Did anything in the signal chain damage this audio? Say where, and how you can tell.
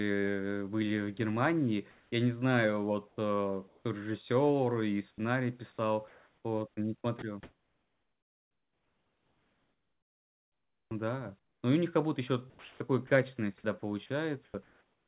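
Yes. In call processing, at 1.91–2.12, 3.08–3.17, 3.68–3.83 and 6.08–6.44 s the background turns into steady, featureless noise, likely comfort noise in place of the background.

Also in call processing, speech at 5.16 s starts abruptly, missing about 20 ms of its soft beginning. This is likely an onset clipped by the voice detector.

At 7.19–11.63 s, 12.5–13.1 s and from 13.62 s to the end, speech turns choppy. This is likely sound chopped by the voice detector.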